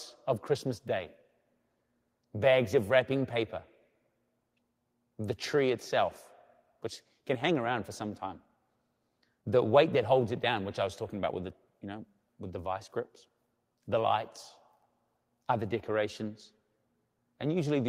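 Nothing stood out as a technical fault anywhere in this speech recording on listening.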